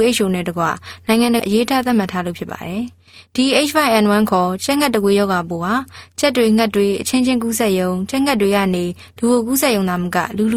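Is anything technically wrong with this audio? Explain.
Yes, there are two kinds of fault.

Skip ahead: between 1.39 and 1.41 s playback jumps forward with no gap, and around 0.4 s of audio is simply missing. That stretch was dropped while later audio was already queued, so the two sides are butted together almost directly and the sound lurches forward abruptly. On a waveform the envelope changes shape suddenly at that point. A spectrogram shows harmonic tracks that break and restart at a different position, with no silent gap between them.

Jitter buffer speed-up: from 1.95 to 2.58 s the audio runs at 107% speed, and from 3.38 to 5.19 s at 106%. The receiver's buffer held more than its target, so it trimmed many short pitch-period-length pieces in a row. That removed roughly 50 ms and roughly 100 ms respectively. The sound feels hurried but keeps the same pitch. A spectrogram shows unchanged harmonic spacing with events packed slightly closer in time. 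A waveform shows periods spliced out with small seams at the joins.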